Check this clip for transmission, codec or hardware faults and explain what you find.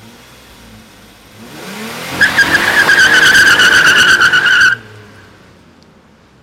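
No faults were found.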